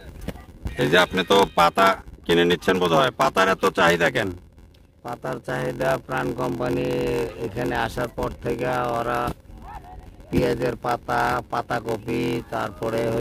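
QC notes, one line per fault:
Throughout: block size mismatch (padded). Short writes into longer reads leave zero-filled gaps, buzzing at 86.1 Hz and slowing playback to 0.861x, which fits a 512-sample read block.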